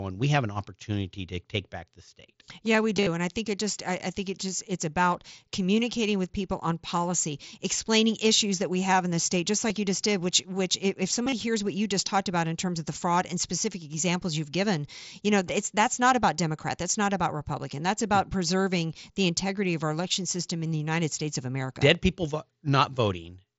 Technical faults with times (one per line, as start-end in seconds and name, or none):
2.97-3.07 concealed Bluetooth headset packet loss
9.69 concealed Bluetooth headset packet loss
11.23-11.32 concealed Bluetooth headset packet loss